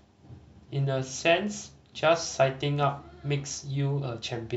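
Nothing in this speech recording stands out as a technical fault, so there's nothing to point to along the way.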